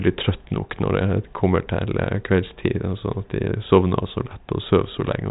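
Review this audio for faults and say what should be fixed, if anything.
Nothing here needs fixing: the speech has been carried over a G.726 ADPCM telephone path at 40 kbit/s, with any coding trace at most faint and nothing above 3.8 kHz, as that channel's band limit would leave it.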